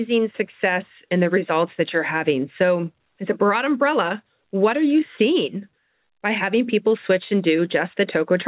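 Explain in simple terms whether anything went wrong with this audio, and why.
Yes. From 0.23 to 8.33 s the speech drifts slightly slow, running at 97% speed with small hiccups, as repeated timing corrections stretch it by about a third of a second overall. The cause is clock drift between sender and receiver: the sending device's clock ran about 3 percent slow, so the receiver kept repeating tiny pieces to stay in step. The call itself came through a phone-style codec, so nothing above 4 kHz is present.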